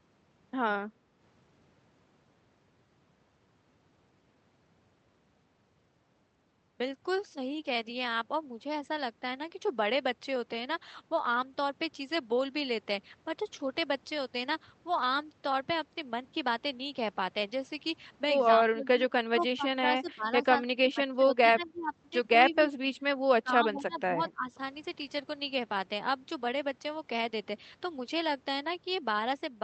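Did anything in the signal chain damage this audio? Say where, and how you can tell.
Yes. In call processing, the background is gated by the echo canceller at 1.07–1.18 s: room noise dips about 5 dB, showing as a shallow notch in the waveform's floor.

The speech is suppressed in pieces at 18.62, 19.31, 20.6, 22.42, 23.42, 23.72 and 24.18 s, dropping up to roughly 25 dB. The spectrogram shows dark gaps. This is likely speech suppression in double talk by the echo canceller.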